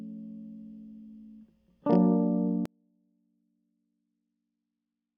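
At 2.66 s the music cuts out abruptly and never returns. This is an audio dropout to a faint residue. Only a faint trace of the music remains, roughly 40 dB down, to the end. The wanted signal was likely lost while the path stayed live.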